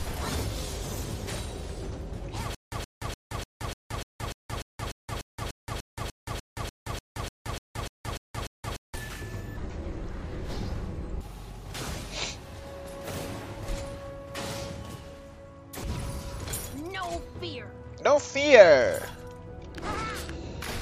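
A playback stall, likely from the stream running dry, causes stutter with silent gaps from 2.55 to 8.95 s: a 122 ms fragment repeats 21 times, separated by 174 ms of dead silence.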